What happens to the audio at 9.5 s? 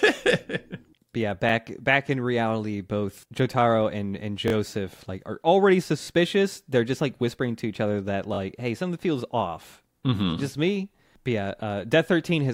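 Nothing goes wrong at 9.5 s; the speech carries on intact through that moment, with no dropout, click or distortion to be heard.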